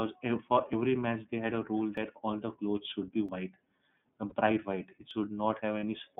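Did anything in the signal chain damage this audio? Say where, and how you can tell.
Yes. Three kinds of damage are audible in this speech clip.

The iLBC codec colours the whole clip. The line band runs from about 150 Hz to 3.6 kHz, so nothing above 4 kHz survives, and the speech has a rough, slightly synthetic grain. That grain comes from each 30 ms frame's excitation being coded independently at low rate, which fits iLBC's 13.33 kbps mode. This damage comes from the codec stage, and it is plainly audible.

Dropped buffers (overruns) cause four forward jumps, at 0.73, 1.97, 3.29 and 5.11 s. The first comes just before "match they had a" and skips about 40 ms. The second falls between "they had a rule" and "all the clothes should", and the third follows "the clothes should be". Those two each lose only a sliver, around 10 ms, and the last about 20 ms. There is no silence at these points, only a splice, which points to the driver or buffer stage. 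The likely cause is the program failing to read samples before the hardware overwrote them.

Lost iLBC frames produce two short held, buzzy patches, at 4.29–4.33 s and 5.80–5.84 s. Each replaces one 30 ms frame. The decoder filled the gap by repeating the last pitch cycle with added noise, which is why it sounds like a brief sustained vowel. Because iLBC frames stand alone, the speech recovers immediately afterwards. This damage comes from packet loss on the network.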